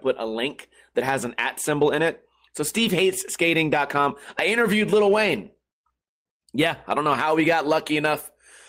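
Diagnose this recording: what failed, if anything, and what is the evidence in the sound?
No audible faults found.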